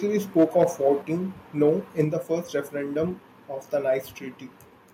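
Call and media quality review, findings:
Microphone overload, 0.39–0.88 s and 1.62–1.70 s: harsh crackle on the loudest speech peaks, tops flattened. Likely mic input gain set too high, so the converter hit full scale, about 4 dB over the limit in the first stretch and about 1 dB over in the second. Roughly 1 to 1.5% of samples clipped in each.

Microphone volume stepped down, 1.02 s and 2.04 s: abrupt level drop of about 4 dB each time, applied equally to the speech and the background. Likely automatic gain control in the call software cutting device input gain in one step after the preceding clipped peaks.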